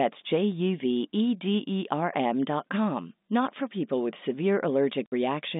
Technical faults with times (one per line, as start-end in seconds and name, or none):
5.06-5.12 packet loss filled with silence